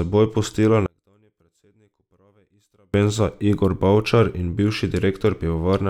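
One channel inverted, from 0.86 s to 2.94 s: across this stretch the speech nearly vanishes, the level falling by about 39 dB before returning at full strength. The likely cause is one stereo channel with reversed polarity. When the two channels are summed, the centred voice present in both cancels against its inverted copy, leaving only the small differences between them as a faint residue.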